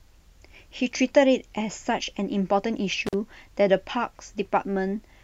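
Intermittent contact at 3.07 to 3.14 s: a loose connection opens for about 42 ms, cutting the speech out with crackle at each edge and faint hiss during the gap.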